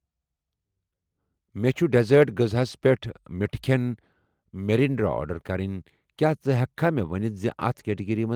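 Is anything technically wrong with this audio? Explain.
No, nothing is technically wrong with this audio.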